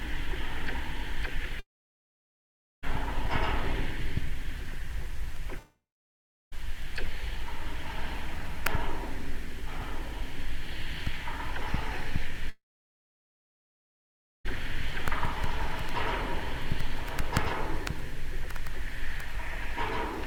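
At 1.59 to 2.85 s, 5.59 to 6.54 s and 12.50 to 14.47 s, the sound smears into a brief fading buzz, then goes silent for about 1.2, 0.7 and 1.9 s before resuming further on. This is likely a long network dropout, with roughly 1.2, 0.9 and 2.0 s of audio never arriving.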